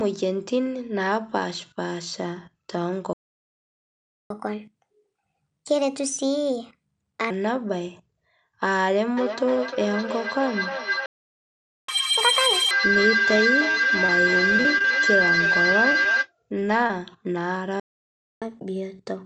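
At 3.13 s the speech stops dead. This is a playback stall. The output stays silent for 1.17 s, until 4.30 s. The player likely ran out of data or had its thread blocked. The speech then resumes.

From 4.30 s to 7.30 s comes catch-up at higher speed. The player works off its backlog by resampling at 1.25 times normal speed. Pitch rises with it, by about four semitones. The voice sounds hurried and raised, then drops back to normal at 7.30 s.

At 9.17 s a feedback howl begins and runs to 16.32 s. Two devices on the same call share a room. The sound loops from loudspeaker to microphone and gains level on every trip. The repeats narrow to a tone of roughly 1.5 kHz. The loop's delay is about a third of a second. At its peak it sits about 3 dB above the speech.

Inside the howl, at 11.06 s, a second playback stall cuts the output for 0.82 s. The likely cause again is starved or blocked playback. 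At 11.89 s catch-up restarts at twice normal speed until 12.71 s. The pitch jumps by close to ten semitones, so the sound turns sharply chipmunk-like. Then it settles.

From 13.71 s to 13.81 s there is a short stall from a late packet. The packet missed its slot and the jitter buffer ran dry. The receiver held the last sound for 28 ms until the packet arrived. Almost nothing is lost. The result is a sound stretched slightly too long.

Short concealed packet loss follows at 14.06 s, 15.92 s, 16.59 s and 16.87 s. Each time about 20 ms never reached the decoder. The receiver extended the preceding sound to cover the hole, then blended back. Each sounds like a brief smear or wobble, and a short sound can drop out.

Between 14.56 s and 14.86 s the losses cluster. This is repeated packet loss, giving robotic sound. Four gaps arrive in quick succession, 60 ms missing in all, each no longer than 20 ms. 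About a quarter of the stretch is patched. The audio turns choppy, with pieces missing.

At 17.80 s a third playback stall silences the output for 0.62 s. It is likely another buffer underrun or blocked thread. From 18.42 s to the end, catch-up runs at 1.1 times speed. The pitch lifts by about one and a half semitones. Throughout, the Opus call path limits the audio to nothing above 8 kHz.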